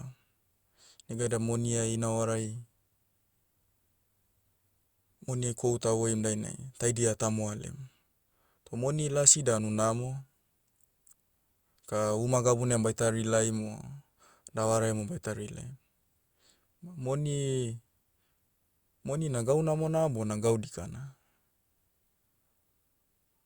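No technical faults occur anywhere in the recording.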